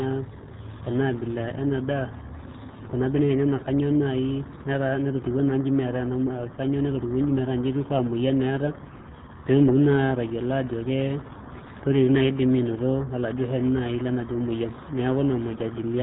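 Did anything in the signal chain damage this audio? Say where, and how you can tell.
Yes, at the codec stage: this speech has been through the RealAudio 14.4 codec for its whole length. Everything above about 3.9 kHz is missing, leaving the voice muffled, and heavy coding damage gives it a gargly, bubbling texture, which fits a low-rate speech codec of around 8 kbit/s. A spectrogram would show a hard ceiling near 3.9 kHz with smeared, blotchy harmonics below it, while the waveform itself looks unremarkable.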